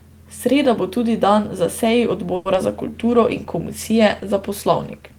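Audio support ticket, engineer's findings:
Call audio freeze, 2.35–2.47 s, just after "tudi dan za seji". Last sound stretched into a fading buzz for about 100 ms, then resumes intact. Likely jitter-buffer underrun from delayed packets, adding about 100 ms delay.

Short concealed packet loss, 2.53–2.56 s. Brief smear where about 40 ms never reached the decoder. Decoder concealment covered 10 ms, then blended back, trimming roughly 30 ms of the earlier delay.

Call bitrate drop, 2.98 s to end. Encoder cut from 32 to 18 kbps for about 2 s. Coarser Opus coding and reduced high-frequency content make the sound rougher and duller.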